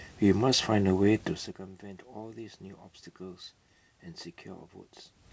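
Speech over a call path with nothing above 8 kHz, which fits a wideband codec such as G.722 at 64 kbps, plus room noise and level shifts around 1.5 s and near 5 s as the talker moves relative to the microphone, with no technical fault present.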